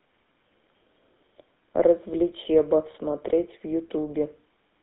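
GSM full-rate codec throughout: pulse-driven vocal-tract modelling leaves the speech buzzy and gravelly, band-limited to about 200 Hz–3.6 kHz, consistent with 13 kbps.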